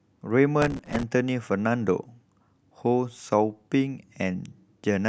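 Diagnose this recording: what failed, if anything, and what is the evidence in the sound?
Processor overload crackle in the driver/buffer stage, from 0.62 to 1.03 s: dozens of very short buffers, around 2 ms each, miss their deadline and replay stale audio, giving gritty tearing. The spectrogram shows dense vertical broadband streaks; the waveform shows repeated hard-edged discontinuities.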